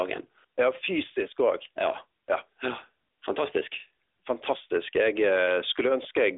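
From start to finish, the speech carries the sound of the AMR narrowband mobile codec. The band is squeezed between about 300 Hz and 3.6 kHz, so it sounds thin and boxed in, with no air on top. The codec rebuilds the voice from a vocal-tract model fed by sparse pulses. Too few bits leave plainly audible damage: a buzzy, synthetic edge on voiced sounds. That degree of damage fits a mid-range AMR-NB mode near 10.2 kbps.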